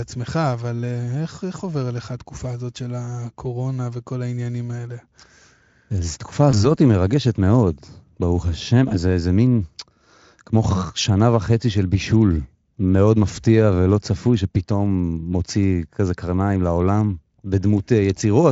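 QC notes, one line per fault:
1.57–1.61 s, 6.51–6.58 s and 8.89–8.94 s: VoIP packet loss concealed by the speech codec. Each gap sounds like a single dropped 20 ms frame. The decoder fills it by carrying the last pitch and spectral shape forward at falling gain, so the speech briefly smears into a buzzy tone or coloured noise that fades. Because the decoder rebuilds each frame from the previous one, it takes tens of milliseconds to recover, which stretches each disturbance beyond 20 ms. Between dropouts the Speex coding itself adds little audible roughness.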